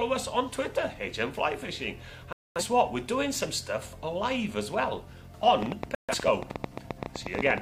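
At 2.33 s the sound drops into a sudden silent hole lasting about 0.29 s, to 2.62 s. This is a corrupt frame muted: damaged compressed frames were rejected by the decoder and replaced with silence. The length fits several frames lost in a row. Timing stays intact.

From 5.62 s to 7.59 s a train of clicks runs over the sound. There are roughly twenty sharp ticks, about 11.8 per second, spaced unevenly. They peak around 15 dB above the sound. The likely cause is interference or a faulty connection or power supply. Inside this stretch, from 5.95 s to 6.15 s, a second muted corrupt frame cuts a shorter silent gap of about 0.2 s.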